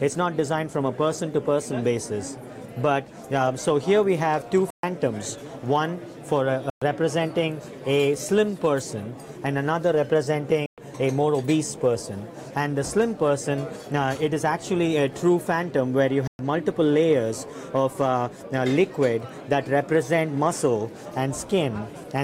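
Four short silences cut the audio at 4.70–4.83 s, 6.70–6.82 s, 10.66–10.78 s and 16.27–16.39 s, each about 120 to 130 ms. They have abrupt or briefly faded edges, and playback resumes further along, as though it had continued. This is likely a Bluetooth dropout, consistent with eight or nine lost packets.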